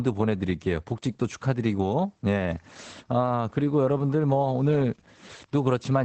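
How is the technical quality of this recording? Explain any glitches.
The technical quality is limited by audible compression. Opus voice compression is present throughout. Nothing is heard above about 8.6 kHz, the wideband limit of Opus's SILK speech coder. The excitation is coded coarsely, which fits a bitrate around 12 kbps. Speech sounds muffled, hoarse and slightly robotic.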